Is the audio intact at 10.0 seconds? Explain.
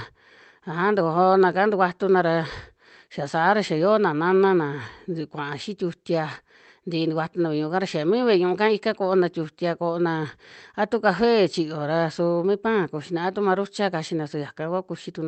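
Yes, the speech at 10.0 seconds is intact, with no dropout, glitch or other fault at that moment.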